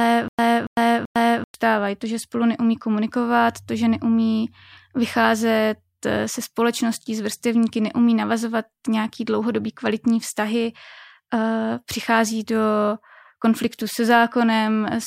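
From the start to 1.54 s, a stutter with silent gaps: a 282 ms fragment repeats three times, each followed by about 104 ms of silence, likely a stalled stream.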